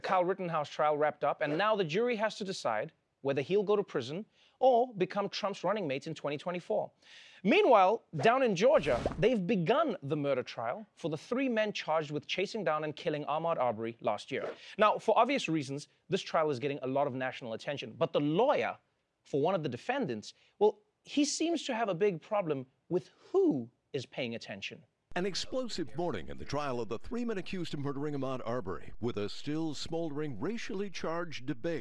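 No faults turn up anywhere in the recording, with nothing to flag at any point.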